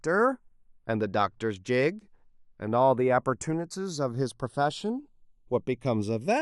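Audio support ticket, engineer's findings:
Channels drifting apart, throughout the speech. Slow flanging on mono fold-down as comb notches sweep through the spectrum. Probable cause: left and right captured on separate devices with unsynchronised clocks, mismatch on the order of 70 ppm. Interchannel delay keeps sliding, reaching a bit under half a millisecond by the end. Fix: lock both devices to one clock, or capture through a single interface.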